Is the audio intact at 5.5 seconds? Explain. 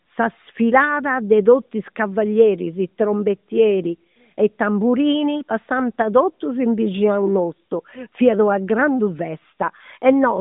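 Yes, the audio is intact at 5.5 seconds, with nothing there beyond the narrowband sound of the AMR-NB mobile codec, which is working as it should.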